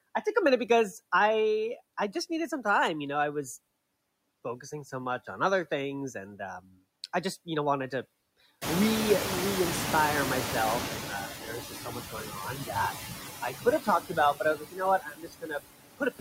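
A speech clip with noise suppressor artifacts throughout. The suppressor cuts steady background noise by about 19 dB, band by band and frame by frame. The noise sinks between words and swells under them. Around 8.5 s the room noise jumps by about 25 dB, ending up only about 8 dB below the speech. Then the noise suppressor is catching up from 8.61 to 11.28 s. Its noise estimate lags, so at first the noise is cut by only about 9 dB. It sinks as the estimate adapts over 2.67 s. After that, speech is cut by the noise suppressor, which takes parts of it for noise. This happens at 11.28 to 12.75 s, 13.41 to 14.82 s, 14.99 to 15.61 s, and from 15.97 s to the end. The drops reach about 11, 16, 22 and 21 dB. The swallowed parts last about a second in the first stretch, about half a second in each of the next two, and a brief moment in the last.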